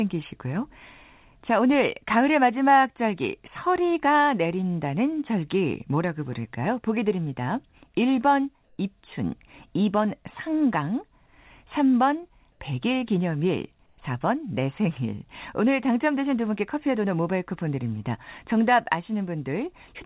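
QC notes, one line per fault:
8.64–8.78 s, 12.52–12.60 s, 13.86–13.98 s: comfort noise in place of the background. Brief pauses lose their real background to a flat, featureless hiss, about 2 dB louder, 1 dB quieter and 3 dB quieter respectively. The likely cause is discontinuous transmission filling pauses with synthetic noise. The spectrogram shows smooth, uniform patches below 4 kHz, and the waveform shows a steady low-level band.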